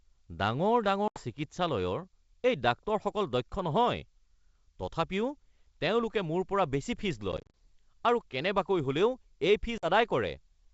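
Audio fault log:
1.08–1.21 s, packet loss on an ADPCM call: about 80 ms drops to hard-edged silence. When the speech comes back, the decoder's predictor and step size have drifted from the sender's, so it resumes slightly distorted.
7.32–7.55 s, same fault: 130 ms lost in bursts across 220 ms, none longer than 30 ms, giving a choppy stutter.
9.78–9.86 s, same fault: a 50 ms hole, set against G.722 wideband coding that shows little or no damage of its own.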